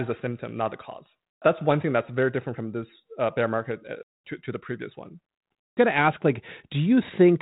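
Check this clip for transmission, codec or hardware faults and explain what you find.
No transmission, codec or hardware faults turn up in the clip.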